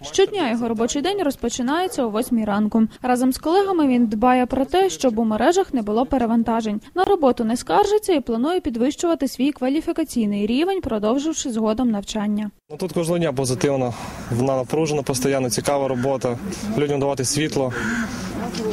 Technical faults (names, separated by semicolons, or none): gap at a join of encoded pieces